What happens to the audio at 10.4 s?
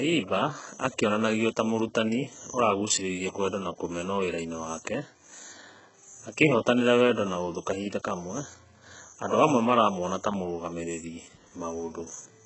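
At 10.4 s the speech has the same damage it carries throughout the clip. The treble is rebuilt and stops at 8 kHz, so s sounds come out gritty and metallic. The likely cause is HE-AAC compression, at a low bitrate near 8 kbps, with heavy codec damage.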